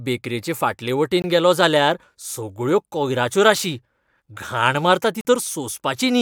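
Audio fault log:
1.22–1.24 s and 5.21–5.25 s, block of digital silence: The speech drops abruptly to dead silence and returns just as suddenly. The first gap lasts 20 ms. The second lasts 40 ms. In both, a stretch of samples was replaced by zeros with no fade in or out, most plausibly because the output buffer was not filled in time.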